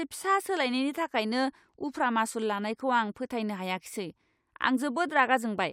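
No technical faults occur at any point in the recording.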